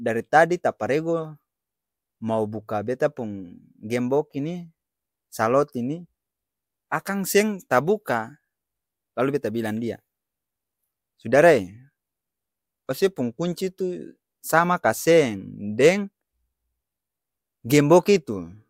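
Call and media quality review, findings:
No call or media quality issues found in this speech recording.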